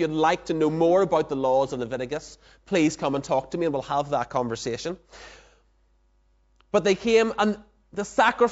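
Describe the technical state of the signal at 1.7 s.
At 1.7 s the signal is intact, with no dropout, clipping, distortion or other fault audible in the speech at that moment.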